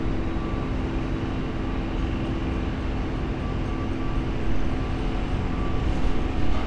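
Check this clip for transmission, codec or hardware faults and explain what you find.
Nothing wrong turned up here; the everyday sounds in the clip come through as they should, with no transmission, codec or hardware trouble to point to.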